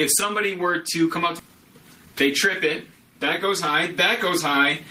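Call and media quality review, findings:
Skip ahead, 1.39 to 1.41 s: a stretch of audio was discarded in transit or by an overflowing jitter buffer while later audio sat queued. Roughly a second of sound is gone, and the two sides are butted together with no fill, an abrupt forward jump.

Jitter buffer speed-up, 1.49 to 2.14 s: the buffer ran above its target depth, so the receiver repeatedly cut pitch-period-length slices, roughly 70 ms in total. Playback runs at about 110% speed with unchanged pitch and sounds hurried.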